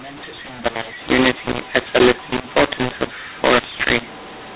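From the first moment to the end, the speech carries a mu-law and A-law mix-up. The audio was encoded with G.711 mu-law but decoded as A-law. The two laws map their 8-bit codes to different levels, so the decoded samples land at the wrong sizes. Loud parts turn harsh and distorted. Pauses fill with a hiss, because near-silent samples come out well above zero. The whole signal stays band-limited below 4 kHz, which fits telephone coding at 8 kHz.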